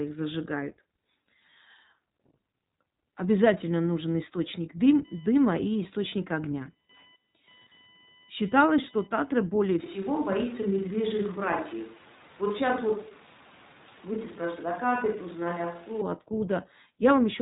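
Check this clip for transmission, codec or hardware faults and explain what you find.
Two faults are present. A codec fault runs through the whole clip, and a hardware noise fault affects its middle section.

The iLBC codec is active from start to finish. Nothing above 3.8 kHz survives, so the speech sounds narrowband and boxed in. The coding damage is plainly audible as a rough, slightly synthetic edge on the voice. The texture points to iLBC's 20 ms frame mode at around 15.2 kbps. Each frame's excitation is coded on its own, without leaning on the frame before.

Computer activity noise runs from 4.93 s to 9.49 s, starting just after "обязательно нужен источник". It is a fast buzzing, pulsing at roughly a kilohertz. It sits well below the speech, very roughly 30 dB down. It does not follow the voice. Instead it tracks load changes in the computer, which disturb the shared ground of the audio circuit and inject this chirpy interference.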